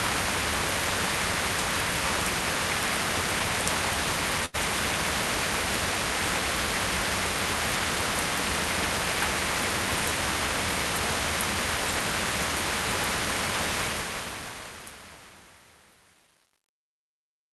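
At 4.45 to 4.56 s, a burst of packet loss: a run of packets never arrived in time, so the receiver stretched the last sound for about 83 ms while fading it down, leaving a held, decaying smear before the sound resumes with roughly 80 ms skipped.

From 13.8 s to the end, truncation distortion on a fade: the fade-out that begins around 13.8 s was processed with too little resolution and no dither, consistent with a roughly 9-bit stage. From 14.10 s the tail turns gritty.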